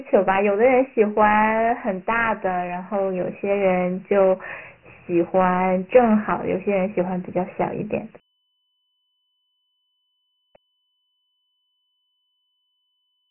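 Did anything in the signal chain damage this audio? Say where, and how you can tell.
Yes, at the codec. Dialogic VOX ADPCM throughout, consistent with 4-bit coding at 6,000 samples a second, leaves nothing above 3 kHz and coarse steps that drag gritty hiss behind the speech.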